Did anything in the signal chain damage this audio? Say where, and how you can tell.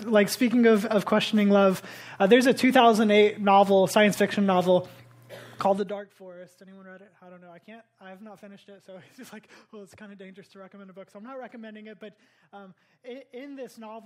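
No, nothing along the chain from capture to playback shows audible damage to this audio.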